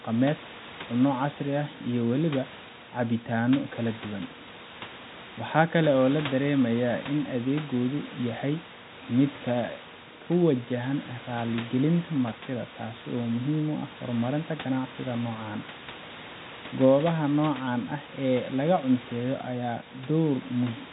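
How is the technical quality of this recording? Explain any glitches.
No glitches: the speech sits about 17 dB above room noise and carries the narrow band of G.711 telephone coding, with nothing above 3.8 kHz, as that format delivers by design.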